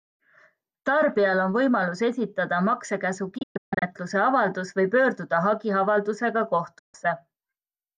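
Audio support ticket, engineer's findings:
Digital broadcast dropout, receiver muting on failed frames: broken holes 3.38–3.83 s after "on võimalus esitada maksekäsu", longest 144 ms, with gap lengths fitting 24 ms frames; one solid 144 ms gap at 6.79 s after "avaldus või pöörduda hagiavaldusega". An 8 ms fade to true silence, with no concealment or smearing, separates this from packet-loss repair.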